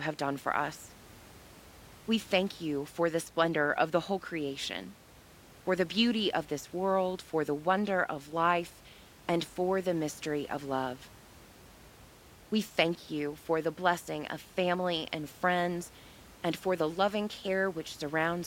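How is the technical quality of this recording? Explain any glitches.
No glitches to report; the only thing under the speech is room noise about 24 dB down, which belongs to the recording space rather than the system.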